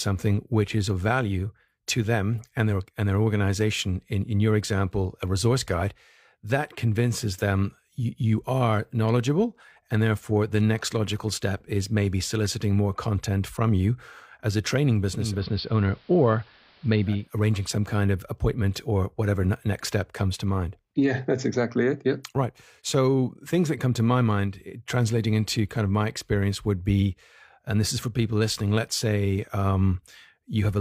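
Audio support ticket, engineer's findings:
Digital radio blending to analogue, 15.12 to 17.38 s, after "you as a training" until "some kind of appointment". Tuner lost digital, crossfaded over about 0.34 s to the AM feed. Top end dulled, faint hiss well under the signal, level holds steady.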